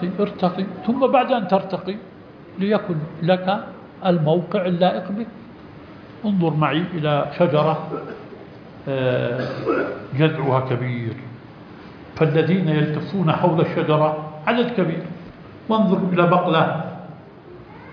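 Nothing stood out as technically wrong on listening to the audio.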